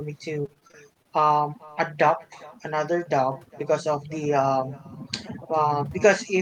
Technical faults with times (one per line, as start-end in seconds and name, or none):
0.00-6.41 echo with no canceller
0.41-1.70 repeated packet loss (robotic sound)